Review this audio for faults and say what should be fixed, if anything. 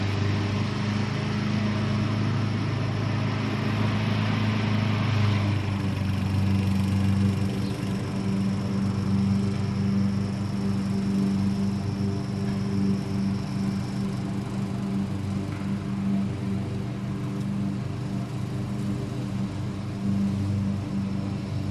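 Nothing needs fixing, as the signal holds steady throughout with no audible technical fault anywhere in the audio.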